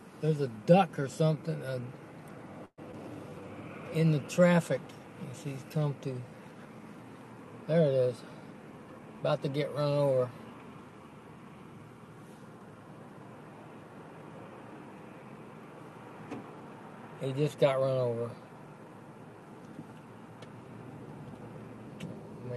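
Call audio freeze, 2.65 to 2.80 s: the sound stretches into a fading buzz, the last 50 ms silent, likely from delayed packets draining the jitter buffer. About 123 ms is inserted and nothing is lost.

Short concealed packet loss, 2.92 to 2.95 s: about 40 ms never arrived, leaving a brief smear or wobble as the receiver extends 10 ms and rejoins, catching up roughly 30 ms.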